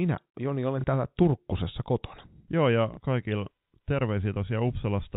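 At 0.81 to 0.84 s and again at 2.94 to 2.97 s, the speech gives a small blip: packet loss with last packet repeated. Each 30 ms gap, which fits a single lost packet, was filled by replaying the previous packet. The replay seldom lines up with the pitch cycle. A waveform shows a copied 30 ms segment with steps at its edges. A spectrogram shows the speech within the telephone band that stops at 4 kHz.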